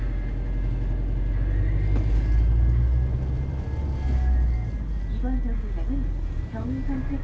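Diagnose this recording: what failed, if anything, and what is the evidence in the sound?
Nothing has failed here: the audio has simply come through a call path whose codec leaves nothing above 8 kHz, which fits wideband G.722 at 64 kbps, so that top-end limit is just how this link sounds.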